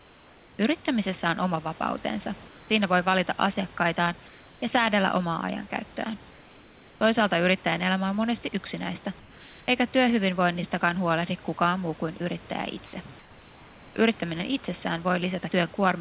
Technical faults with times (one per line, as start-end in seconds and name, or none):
0.00-0.59 comfort noise in place of the background
2.48-2.70 comfort noise in place of the background
4.28-4.62 comfort noise in place of the background
6.31-7.01 comfort noise in place of the background
13.19-13.96 comfort noise in place of the background